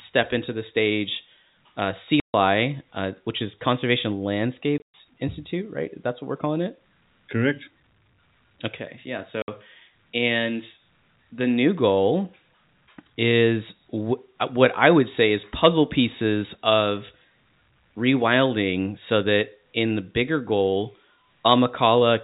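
Hard-edged dropouts cut the speech at 2.2–2.34 s, 4.78–4.94 s (a broken 160 ms patch) and 9.42–9.48 s. This is packet loss filled with silence, in steps that fit 20 ms packets, through telephone-band G.711 coding.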